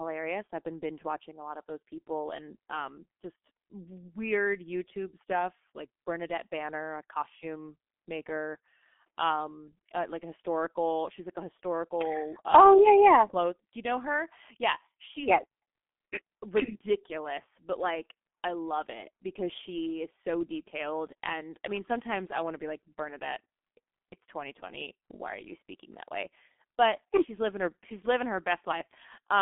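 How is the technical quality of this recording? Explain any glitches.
Quality's pretty rough, and the whole recording suffers from the same single problem.

Throughout the clip, the speech carries the sound of the G.723.1 codec, an old internet-telephony coder that works in 30 ms chunks and models the voice rather than storing the waveform. The band is squeezed to about 200 Hz to 3.5 kHz, and the damage is heavy, consistent with its roughly 6 kbit/s mode. Because the voice model updates so slowly, consonants smear together, and everything comes across muffled and hoarse.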